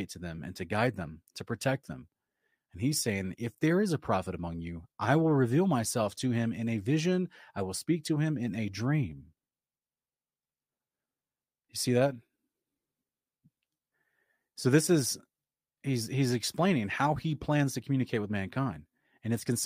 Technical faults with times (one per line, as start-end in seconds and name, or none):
none